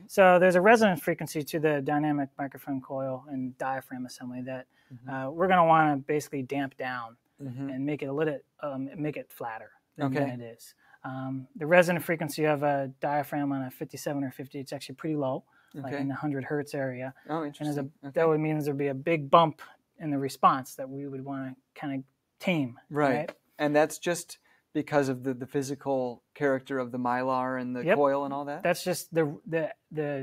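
At 4.63 to 5.08 s and again at 15.42 to 15.74 s, the sound briefly sinks, by about 12 dB and about 11 dB, for roughly a few tenths of a second each. This is sound cut by the noise suppressor, which mistook the sound for noise and pulled it down.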